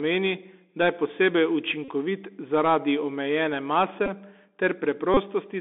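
Throughout, a Bluetooth CVSD headset codec narrows the speech to about 250 Hz to 3.6 kHz, with scratchy s sounds and granular hiss: the spectrogram is blank above 3.6 kHz and speckled below.

At 1.85 s, 4.06 s and 5.14 s comes a Bluetooth headset packet repeated fault. Lost packets are refilled with the previous one, giving buzzes near 267 Hz lasting about 38, 15 and 26 ms. Each shows as vertical striations every 3.75 ms.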